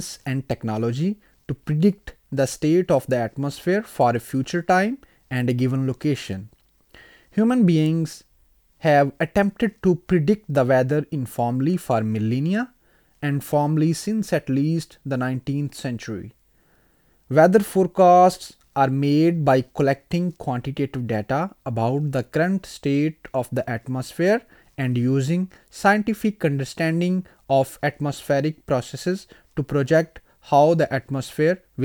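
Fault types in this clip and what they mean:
No fault types can be heard in this clip.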